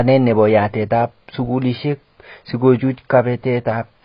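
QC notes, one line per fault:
throughout, AAC compression: likely heavy low-bitrate AAC-LC coding, fitting roughly 16 kbps, cuts everything above 5.1 kHz, leaving the speech dull, smeared and warbling.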